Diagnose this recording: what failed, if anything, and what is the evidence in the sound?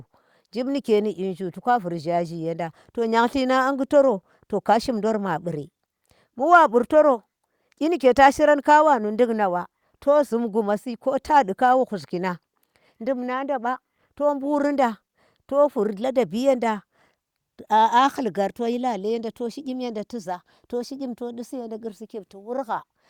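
Nothing failed here that I can hear: the speech comes through steady and intact, with no stage in the chain giving itself away.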